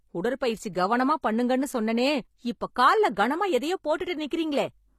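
HE-AAC compression, likely the cause of what is heard across the whole clip: the speech has plainly audible codec damage, and nothing comes through above 14.9 kHz. The lower spectrum is coded directly, while the upper range is rebuilt by copying lower bands upward under a coarse envelope. The treble therefore sounds present but synthetic, with s sounds gritty and metallic. The degree of damage fits a low bitrate in the region of 24 kbps.

Pre-echo at 3.98 s: a hiss of about 19 ms is heard just ahead of a sharp onset. The codec spreads quantisation noise across its whole transform block, so noise sized for the loud attack also fills the quiet gap before it. The attack sounds blunted and smeared, announced by a brief wash of noise rather than starting cleanly.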